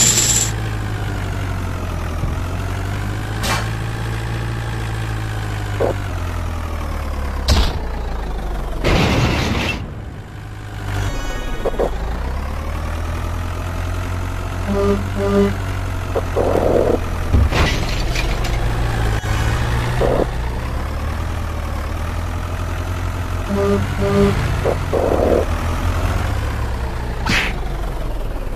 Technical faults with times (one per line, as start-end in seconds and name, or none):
2.23 damaged data in a compressed stream
2.62-26.71 clock drift buffer slips
6.09 damaged data in a compressed stream
17.65 damaged data in a compressed stream